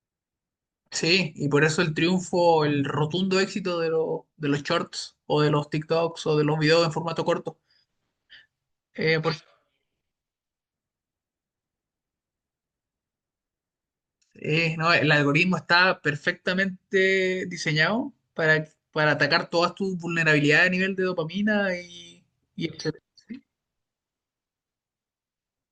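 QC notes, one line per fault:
No faults found in this speech recording.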